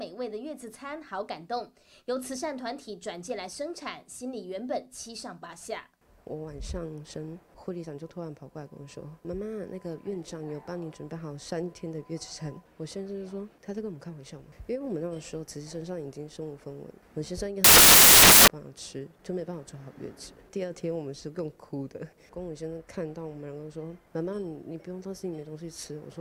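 From 17.64 to 18.48 s, samples built from the wrong bytes turn the sound into loud, harsh broadband noise: a flat, full-band smear on the spectrogram and a dense waveform block.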